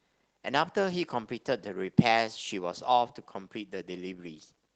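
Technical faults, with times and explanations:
No technical faults detected.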